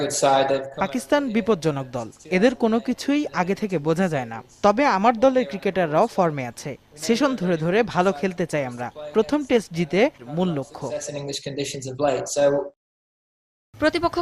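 Right around 10.19 to 10.24 s the sound jumps abruptly forward with a quick little blip, like a chunk of the programme just isn't there. That's most likely a stream segment skipped: one piece of the segmented stream failed to load, and playback carried straight on with the next.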